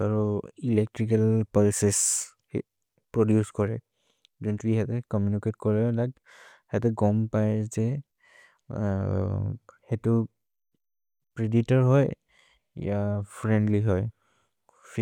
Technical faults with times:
none

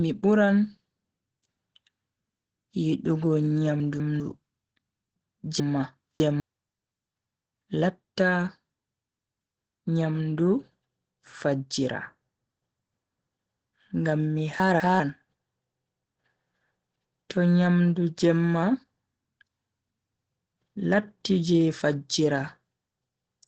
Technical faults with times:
0.00-23.47 Opus voice compression
3.80-4.20 chunks out of order
5.60-6.40 chunks out of order
14.60-15.00 chunks out of order

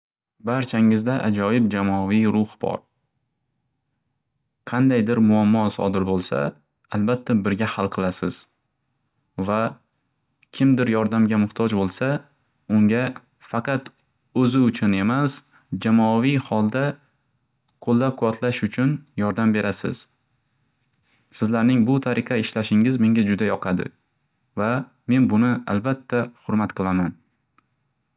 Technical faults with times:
none

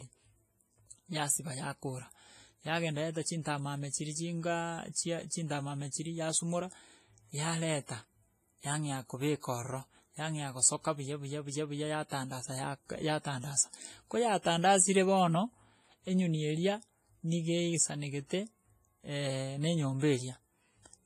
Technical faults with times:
0.00-21.06 WMA compression
12.09-12.12 pre-echo
14.42-14.45 pre-echo

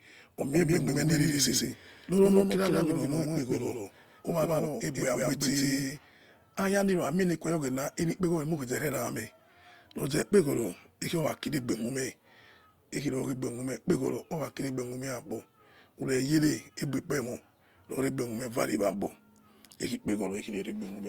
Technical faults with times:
0.52-5.98 doubled audio track

